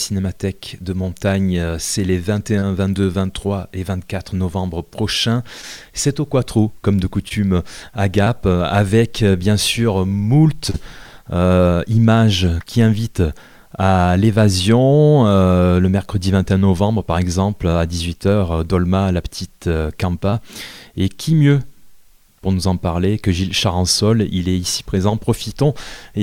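Short concealed packet loss occurs six times: at 2.59–2.63 s, 5.61–5.65 s, 7.29–7.32 s, 8.24–8.28 s, 10.70–10.76 s and 20.30–20.34 s. Each time about 20 ms of audio (40 ms at 10.70 s) failed to reach the decoder in time. The receiver extrapolated from the preceding sound and then cross-faded back into the real signal, leaving a brief smear or wobble.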